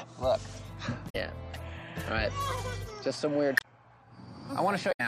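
At 1.06 to 1.16 s, 3.54 to 3.65 s and 4.88 to 5.00 s, damaged data in a compressed stream breaks the audio for about a tenth of a second each time. Corrupted bytes make the decoder misread frames and hunt for the next valid header, producing a short squawk or blip. On a spectrogram each appears as a sudden broadband smear or blocky patch, and the waveform shows an abrupt discontinuity.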